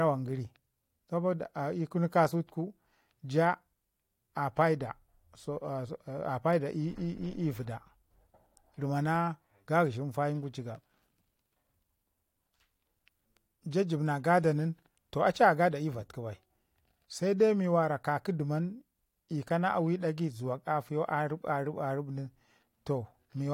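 No technical faults are audible.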